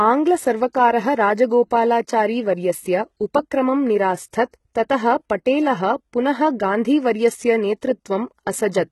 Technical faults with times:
0.00-8.91 HE-AAC compression

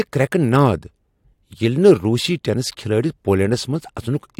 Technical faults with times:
none

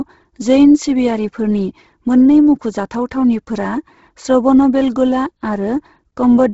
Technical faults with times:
0.00-6.53 Bluetooth LC3 compression

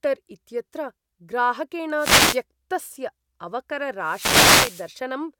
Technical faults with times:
1.96-2.42 wireless microphone noise hit
4.01-4.93 wireless microphone noise hit

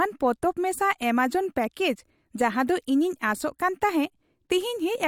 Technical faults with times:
none

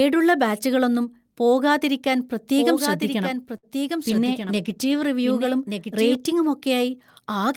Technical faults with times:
2.57-6.15 doubled audio track
3.57-3.65 short stall from a late packet
3.99-5.15 call bitrate drop

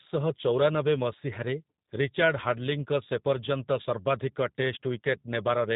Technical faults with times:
0.00-5.76 G.729 codec

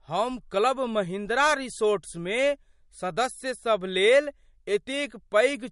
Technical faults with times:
0.00-5.71 MP3 compression

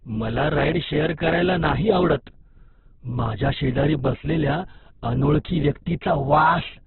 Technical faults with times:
0.00-6.86 Opus compression

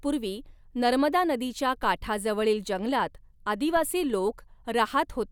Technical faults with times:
1.83-3.77 DC step

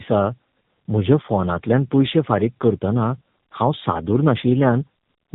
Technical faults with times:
0.00-5.35 tandem speech coding

